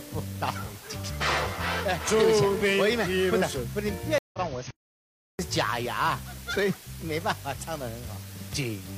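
Throughout, low bit depth with dither leaves a constant, even hiss about 20 dB below the signal. This fits a 6-bit quantizer whose rounding error is spread into white noise without distortion. From 4.18 to 4.39 s a stream reconnect cuts the audio for 151 ms. The player then restarts decoding mid-stream, and the sound resumes roughly 0.15 s further on than where it broke off. From 4.71 to 5.39 s the output goes silent for 684 ms before continuing, a playback stall likely caused by the player running out of data or its thread being blocked.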